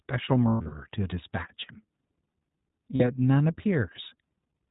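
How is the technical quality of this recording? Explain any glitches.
Technical quality is limited by low-bitrate narrowband coding throughout, with two short dropouts.

The whole recording carries the sound of the iLBC codec. Nothing above 4 kHz survives, so the speech is band-limited and thin, and the coding damage is plainly audible as a rough, slightly synthetic texture. The character fits iLBC at around 15.2 kbps with 20 ms frames: each frame's excitation is coded independently, which keeps the speech clear but trades away naturalness.

Lost iLBC frames occur twice. From 0.48 to 0.74 s, losses scattered across about 240 ms remove about 200 ms of audio in total, with the longest continuous run about a tenth of a second. At 2.96 to 3.02 s, a shorter gap of about 40 ms is lost, consistent with two 20 ms frames. In both places the decoder conceals the missing audio by repeating the last pitch cycle blended with noise, fading it as the gap lengthens. 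The result is a held, faintly buzzy or breathy vowel-like sound in place of the missing speech. Because iLBC frames don't depend on their predecessors, the speech snaps back to normal almost immediately after each gap.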